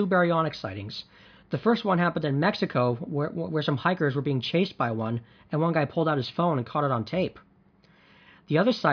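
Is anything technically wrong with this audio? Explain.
No, nothing is technically wrong with this audio.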